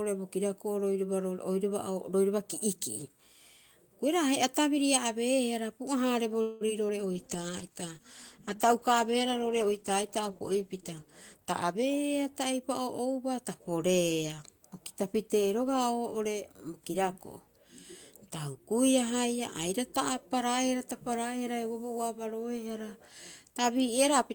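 At 6.41 s a call audio freeze begins, likely because packets were held up in transit until the jitter buffer ran dry. For about 0.21 s, until 6.63 s, the receiver keeps stretching the last sound into a fading buzz-like tail. When the packets arrive, the speech resumes exactly where it stopped. Nothing is lost, but the gap pushes everything after it roughly 0.19 s later than it should be.

Right after the freeze comes short concealed packet loss, at 6.67 s and again at 6.88 s. Each time, about 20 ms of audio did not reach the decoder in time. The receiver bridged the hole by extending the preceding sound and blending back into the real signal. Each event lasts about 30 ms and is heard as a tiny smear or wobble in the speech.

At 7.15 s a call bitrate drop sets in. The bandwidth estimate fell, and the encoder was pushed from 40 kbps down to 13 kbps, staying at its lowest for about 3.7 s. 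With so few bits the codec quantises coarsely and trims the upper frequencies. The speech turns muffled and rough or watery until quality returns at 12.54 s.

Overlapping the end of that stretch, a jitter buffer speed-up runs from 11.34 s to 13.23 s. The buffer had built up more audio than its target. To shrink it, the receiver repeatedly cut out pitch-period-sized slices, removing roughly a fifth of a second in total. The speech plays at about 110% speed with unchanged pitch, so it sounds noticeably hurried.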